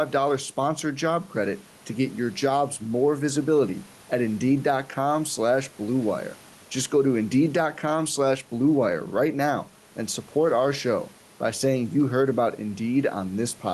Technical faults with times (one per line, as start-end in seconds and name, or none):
0.00-13.74 gain pumping